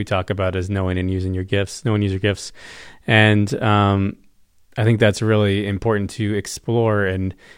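Listening to the speech recording, nothing stood out as a technical problem at any point.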